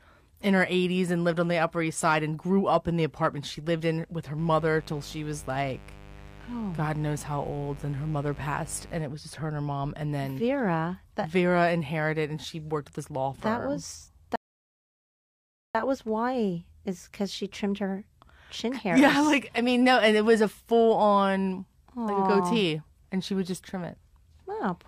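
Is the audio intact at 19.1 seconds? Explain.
Yes, the speech at 19.1 seconds plays through intact, with no audible dropout, click, distortion or other fault at that moment.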